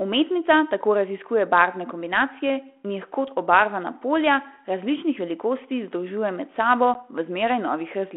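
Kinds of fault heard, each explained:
Packet loss on an ADPCM call: about one packet, some 10 ms, drops to silence at 6.94 to 6.96 s. Unlike a plain dropout, the 32 kbit/s G.726 decoder's predictor and step size lose sync with the sender's, so the speech returns slightly distorted before recovering.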